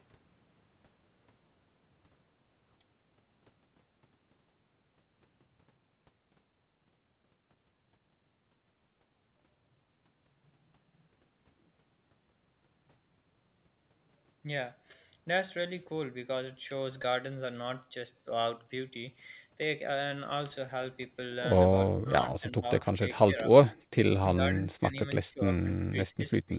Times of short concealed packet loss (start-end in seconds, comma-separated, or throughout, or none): 17.02-17.06